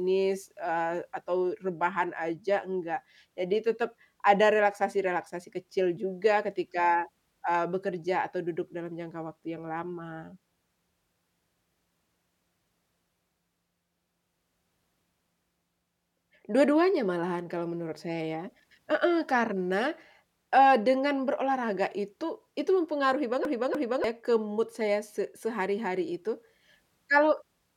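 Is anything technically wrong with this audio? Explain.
Yes. From 23.45 to 24.04 s the speech is a CD stuck on one turn: a scratch returns the laser one track, replaying a 0.30 s fragment twice with brief mutes.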